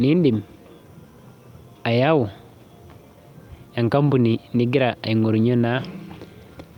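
Nothing technical to flag here; this bit of speech comes across without any audible fault at any point.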